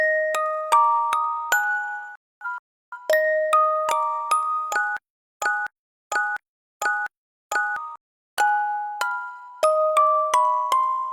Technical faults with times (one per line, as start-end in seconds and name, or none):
2.15-2.98 digital broadcast dropout
4.97-7.76 stutter with silent gaps
7.96-8.38 playback stall
8.38-10.04 time-compressed catch-up